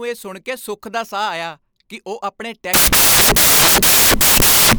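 From 2.74 s, right after "ਆਇਆ ਕਿ ਉਹ ਆਪਣੇ", samples built from the wrong bytes turn the speech into loud white noise until the end, unlike steady added hiss.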